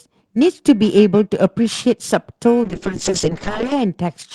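Periodic clock jitter runs through the whole recording: the converter clock wobbles at around 2 kHz, so every speech component carries sidebands near 2 kHz either side, giving a metallic edge and mirrored spectrogram traces that vanish in pauses. From 2.64 s to 3.79 s a call bitrate drop takes the encoder from 32 to 6 kbps, bottoming out for about 1.1 s. The speech turns coarse and muffled, and the spectrogram's upper band empties.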